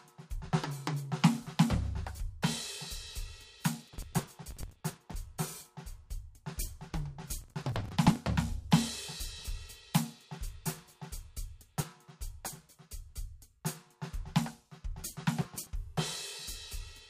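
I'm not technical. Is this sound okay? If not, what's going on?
No. The music has four bursts of processor overload crackle, from 3.82 to 5.14 s, 7.42 to 8.16 s, 11.62 to 11.84 s and 15.41 to 15.67 s. The computer playing it was too busy to prepare each tiny chunk of sound, about 10 ms long, in time, so many chunks were simply skipped. Unlike a single click or one clean dropout, this is a gritty tearing that lasts while the computer is overloaded, then stops.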